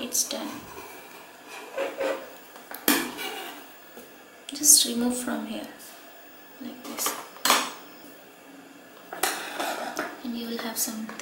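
Around 3.87 to 3.92 s there's an overlapping chunks fault: the next chunk, which fits roughly 4 s blocks, starts early, so about 48 ms plays twice, giving a quick stutter.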